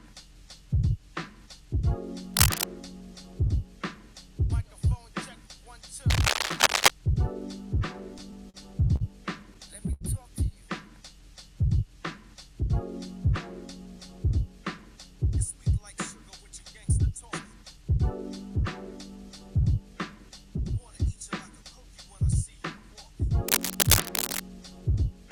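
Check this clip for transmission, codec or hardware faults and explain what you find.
Three faults are present: cable scratch noise, a short stall from a late packet, and repeated stalls (stutter).

Cable scratch noise at 2.34–2.64 s, 6.10–6.90 s and 23.48–24.40 s: ragged rustling bursts, roughly 5 dB above the sound in the first two and about level with it in the last. The likely cause is contact resistance jumping in a worn cable, connector or control as it moves. On a spectrogram these appear as dense, irregular broadband speckle, and the waveform shows jagged spiky fuzz.

Repeated stalls (stutter) at 7.93–8.57 s and 9.54–10.03 s: four brief holds in each span, with the longest about 74 ms. Late packets repeatedly emptied the jitter buffer, so the last sound was stretched each time and the audio drags. A spectrogram shows short smeared horizontal streaks, and the waveform shows repeated, flattened stretches.

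Short stall from a late packet at 8.96–9.03 s: the sound hangs for about 44 ms and then resumes. The receiver held the last sound until the delayed packet arrived. This shows as one frozen, smeared column on a spectrogram.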